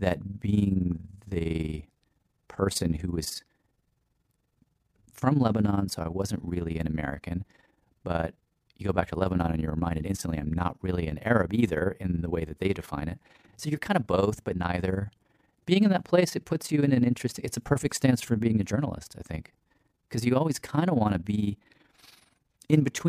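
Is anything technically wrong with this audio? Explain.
Yes. Throughout the speech there is overlap-add ripple: the audio was split into windowed frames and rejoined with overlaps whose gains don't add to a steady level. Loudness therefore swings by about 11 dB around twenty times a second, giving a rough, fast flutter.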